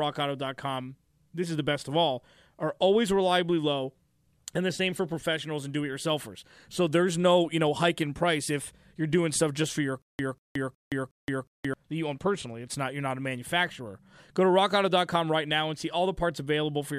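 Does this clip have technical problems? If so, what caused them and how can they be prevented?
Yes. From 10.02 to 11.74 s, after "stuff just for your" and before "that you own personally", the speech falls into a stutter with silent gaps: a 192 ms fragment replays four times, each followed by 172 ms of dead silence, repeating every 364 ms. The likely cause is a stalled player or stream replaying its last buffer on each retry before running empty. The even rhythm and true digital silence set it apart from a random dropout or a gapless loop. Larger buffers and more reliable delivery would prevent it.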